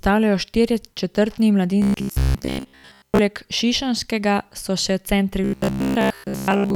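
Speech clip with robotic sound from repeated short buffers at 1.82–3.19 s (after "štirje četrtni") and 5.44–6.75 s (after "šišenskega so še centri"): a rigid 66.8 Hz buzz, likely from a 15 ms buffer looping over most of the sound.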